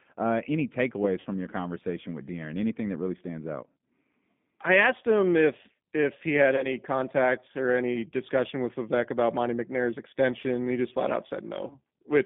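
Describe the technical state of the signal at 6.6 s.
At 6.6 s the sound briefly stretches into a buzzy tone or coloured noise that fades, then stays weak or distorted for tens of milliseconds after about 6.71 s. This is VoIP packet loss concealed by the speech codec, spanning roughly 6.56 to 6.71 s. About 20 ms of audio went missing. The decoder filled the gap by repeating its last pitch and vocal tract filter at falling gain, and because each frame builds on the one before, recovery lags after packets resume.

Underneath, the same moment carries the rough, faintly synthetic character of the G.729 codec, plainly audible and present throughout. Nothing below 150 Hz or above 3.6 kHz comes through, giving a boxy telephone band. At 8 kbit/s the codec rebuilds the signal from a filter, a pitch predictor and a handful of pulses per 10 ms frame rather than the actual waveform, which causes the roughness.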